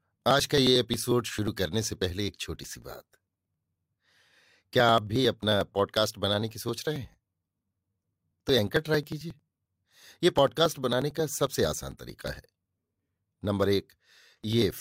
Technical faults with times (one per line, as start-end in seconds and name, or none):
0.13-14.71 periodic USB or driver dropouts